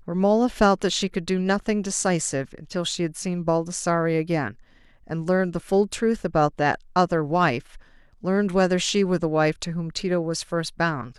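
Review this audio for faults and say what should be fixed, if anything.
Nothing stood out on listening, so there is nothing here to fix.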